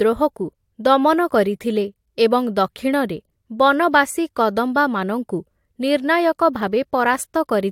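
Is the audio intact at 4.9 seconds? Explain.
Yes, at 4.9 seconds the speech plays through cleanly with no audible fault or disruption.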